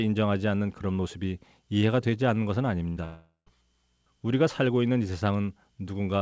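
At 2.90 s there's a burst of packet loss lasting about 80 ms, up to 2.98 s. A short run of packets never made it, so the receiver stretched the last bit of speech for about 60 ms, and you hear that last sound held briefly as it dips in level. When the audio picks up again it has skipped ahead, with about 60 ms of speech simply gone.

Right after that, from 3.04 to 3.48 s, the sound cuts out in a way that's most likely a long network dropout. The concealment keeps the last sound going and fading for most of that stretch, and it sinks into silence for the last tenth of a second or so. When the audio returns, roughly 0.4 s of speech is missing. Throughout, the call codec leaves nothing above 8 kHz, which fits G.722 at 64 kbps.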